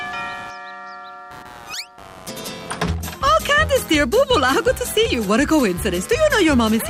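From the start and throughout, computer activity noise runs under the sound: a scratchy, buzzing pulse repeating at around 100 Hz, about 20 dB below the signal. Load changes in the processor or graphics hardware disturb the shared ground. Unlike steady mains hum, it chirps and shifts with the machine's activity, not with the sound.

From 4.43 to 4.68 s, DAB burbling appears. Weak reception let bit errors, at a small fraction of a percent, slip past error correction into the coded audio, so wrong samples put short blips of noise into single sub-bands across roughly a dozen frames.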